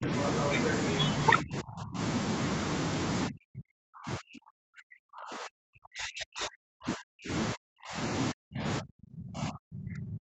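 Right at the start, 0 to 0.09 s, the speech dips by about 10 dB. This is speech suppressed in double talk, likely from an echo canceller turning down the near talker while the far side spoke. It sinks in level rather than dropping out cleanly as a lost packet would.

From 0.2 to 0.99 s the other side's voice leaks through, a second voice about 5 dB under the main speech, likely echo the canceller left in. It is a separate talker, not room reverberation trailing the speaker's own sound.

Double-talk suppression then returns much deeper, at 1.41 to 1.99 s, 3.28 to 7.31 s, 7.54 to 7.99 s, and from 8.32 s to the end. The speech is pushed down by around 30 to 40 dB.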